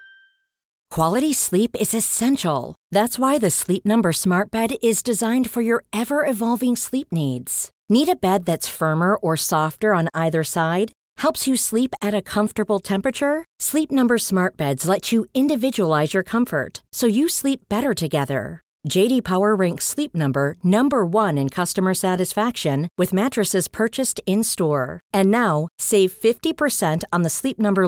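Nothing here calls for a fix: it's a speech recording, and no technical faults turn up anywhere in it.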